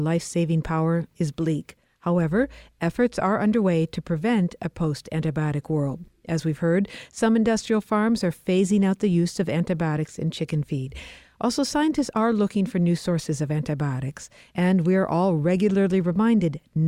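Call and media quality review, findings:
No audible faults found in this speech recording.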